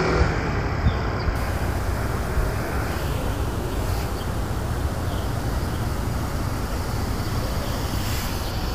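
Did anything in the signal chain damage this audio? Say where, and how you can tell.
Yes. Low bit depth without dither runs from 1.36 to 8.51 s. The sound turns grainy, with distortion that tracks its level and sits only about 20 dB below it. This points to a sample-format conversion that likely truncated to roughly 6 bits without dither.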